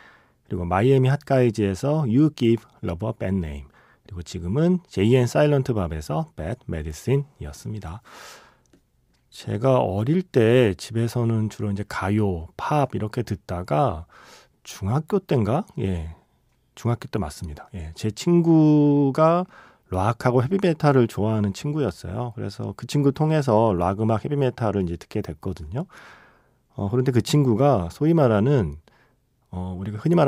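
No technical faults are audible.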